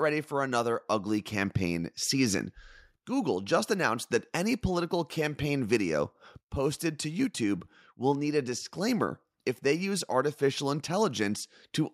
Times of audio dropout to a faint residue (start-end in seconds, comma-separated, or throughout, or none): none